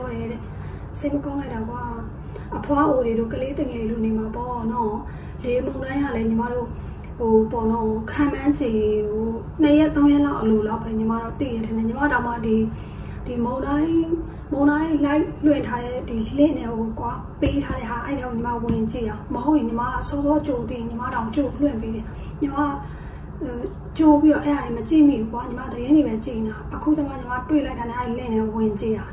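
There are no technical faults in this clip, so there is nothing to describe in time order.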